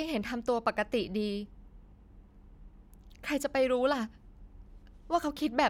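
No technical faults can be heard anywhere in the speech.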